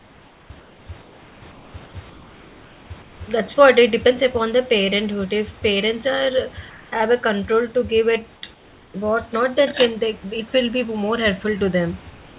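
From 0 to 3.2 s, at 6.7–6.92 s between "parents are" and "have a control to", at 8.54–8.94 s between "control to give it" and "not that can they", and from 12.1 s to the end, the real room background gives way to comfort noise: a steady, featureless hiss, about 2 dB quieter in the last two gaps. The likely cause is discontinuous transmission, with the receiver synthesising noise while the sender is silent. A gate or dropout would leave true silence; here the noise never stops. Everything sits below 4 kHz, which fits a 64 kbps G.711 call path.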